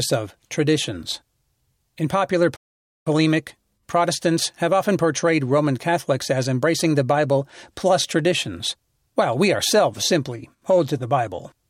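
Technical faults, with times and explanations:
2.56–3.07 s, playback stall: the player most likely ran short of data or had its output thread blocked, so nothing reached the output for 0.5 s. The speech drops abruptly to silence in mid-flow, then picks up again once playback recovers.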